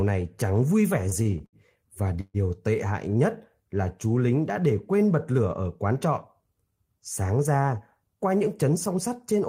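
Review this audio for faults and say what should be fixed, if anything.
Repeated stalls (stutter) occur from 1.09 to 1.56 s, right after "này chẳng vui vẻ". Packets arrived late again and again. The jitter buffer ran empty five times, and the receiver stretched the last sound each time. The longest gap is 72 ms. About 133 ms is filled in, nearly a third of that stretch. Nothing is lost, but the speech drags and stutters. A deeper jitter buffer, or a steadier network path, would prevent this.

A call audio freeze occurs from 2.21 to 2.37 s, just before "tệ hại". The sound hangs as a fading buzz for 135 ms. Its last 30 ms fall silent. The likely cause is packets held up in transit, which emptied the buffer. Speech resumes where it stopped, now 135 ms later. Reducing congestion on the route would prevent this.

A jitter buffer speed-up runs from 8.49 to 8.97 s. The buffer had built up extra delay, so the receiver trimmed short pitch-period pieces many times in a row. 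About 40 ms was removed. Speech plays at 106% speed with unchanged pitch and sounds slightly hurried. Gentler buffer adaptation would prevent this.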